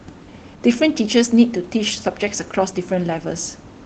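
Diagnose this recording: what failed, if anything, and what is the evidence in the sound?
Nothing stood out on listening to this speech recording that would point to a failure at any stage; the call path's band limit is what that chain normally produces, and the faint room noise well below the speech is part of the recording itself.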